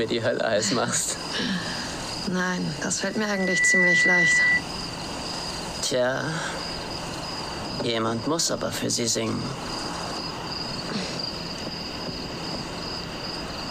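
From 3.12 to 4.63 s, loudspeaker feedback squeal: a single 2 kHz tone swells over about half a second to roughly 10 dB above the sound, steady in pitch unlike a sweeping whistle.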